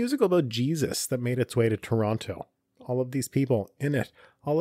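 No faults are audible anywhere in the recording.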